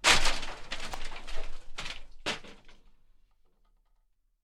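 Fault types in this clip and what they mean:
Electrical switching spike: at 0.94 s, a single sharp snap lands on top of the sound, peaking at around -20 dBFS. It is likely a brief arc from a nearby switch, motor or static discharge that the audio line picked up as one tight burst.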